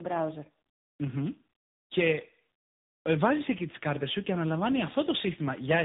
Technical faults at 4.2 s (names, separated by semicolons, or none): tandem speech coding